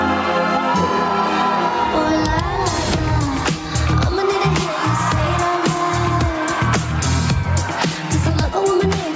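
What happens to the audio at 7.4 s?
At 7.4 s, as throughout the clip, the gain swings by roughly 15 dB, so loud and soft parts sit closer in level and the sound is squashed. This is gain pumping, likely from gain set far too high with a fast limiter clamping down.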